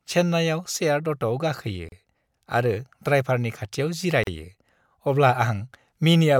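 It's a speech clip with two short gaps at joins of encoded pieces: a dropout of about 34 ms at 1.89–1.92 s, right after "चेन्नाइआव सेयार्ड अट'आव गाखोयो", and another of about 37 ms at 4.24–4.27 s. The pieces were encoded separately and butted together untrimmed, so encoder start delay and last-frame padding leave silences with smeared edges.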